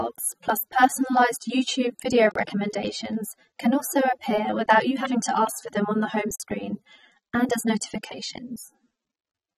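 Across the whole clip the speech sounds dull and smeared, with a warbling, fizzy texture on sustained sounds and sibilants. The codec damage is plainly audible even though content extends up to about 21.2 kHz. The likely cause is AAC compression. AAC-LC quantises its frequency lines against a hearing model, and at a low bitrate, which this texture points to at around 24 kbps, it starves bands of detail and fills them coarsely, producing that unstable, swirling quality.

At 2.31 s a hard-edged hole of 44 ms cuts the audio, which resumes at 2.35 s. This is a gap between chunks. The audio was handled in 4-second pieces, and silence was inserted at the join instead of the next chunk following seamlessly. Nothing is missing from either side. The sound simply stops abruptly and restarts, giving a brief, clean dropout at the boundary.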